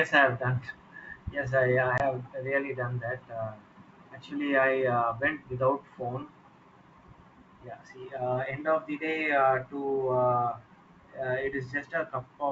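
At 1.98 s, packet loss on an ADPCM call cuts a hard 20 ms hole in the speech, roughly one packet. The decoder's predictor then lags, so the speech returns slightly distorted before settling.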